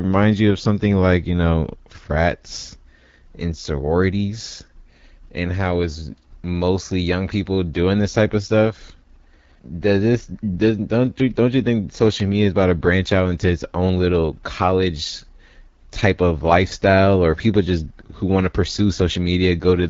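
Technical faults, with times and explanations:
Throughout, AMR wideband (HD Voice) codec. The speech has a rough, raspy grain that stays audible for the whole clip. The codec models the voice as pulses driving a vocal tract filter, coding only up to 6.4 kHz. The band from 6.4 to 7 kHz is filled with shaped noise, not the real signal. At low rates the pulse coding is too coarse, so the voice turns harsh. The damage fits one of the two lowest rates, about 8.85 kbit/s.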